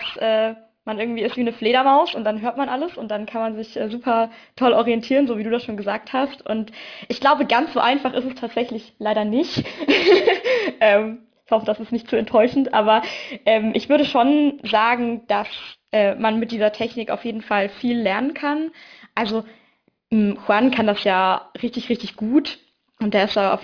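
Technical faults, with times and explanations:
Throughout: aliasing. The sound turns gritty and metallic, with spectrum running hard up to about 5.5 kHz, which fits a resample from 48 kHz to 11 kHz without a low-pass filter. Higher content folds back as unrelated tones, roughly 20 dB below the signal.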